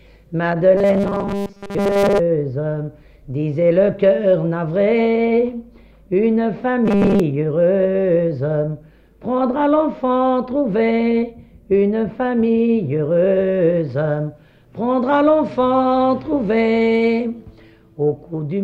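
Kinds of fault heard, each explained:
Robotic sound from repeated short buffers: from 0.77 to 2.19 s and again from 6.86 to 7.20 s, the sound turns into a rigid, metallic buzz locked at 200 Hz. That pitch fits a 5 ms stretch of audio being replayed over and over, likely because fresh audio arrived too slowly and the gaps were filled by repeating the latest short buffer. Most of each affected span is repeated material, so the real audio in between is skipped.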